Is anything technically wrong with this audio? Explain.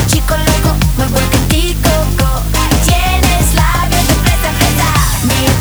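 Yes. Low bit depth with dither runs through the whole clip. The audio sits on only 5 bits, and dither was added before rounding, so the quantisation error comes out as a steady white hiss rather than distortion. That hiss is loud, roughly 15 dB below the signal, and constant. On a spectrogram it shows as an even wash across all frequencies, and on the waveform as a thick fuzzy band around zero.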